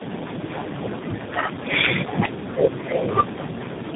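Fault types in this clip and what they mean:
Tandem speech coding: the speech throughout sounds rough, muffled and warbly, with nothing above 3.7 kHz. This fits three separate speech coders in a row, such as AMR-NB, G.729A and CVSD, each re-encoding the previous one's degraded output, so the damage compounds.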